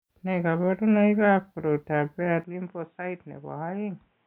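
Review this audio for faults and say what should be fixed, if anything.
At 2.44 s the speech abruptly turns dull and boxy and stays that way to the end. Nothing remains above 3.8 kHz, the level drops by about 10 dB, and a faint new background noise appears, with no gap at the change. The likely cause is that the input switched to a poorer device, such as a second microphone or a headset's narrowband call profile, mid-recording. To prevent it, lock the recording input to one device and disable automatic device switching before recording.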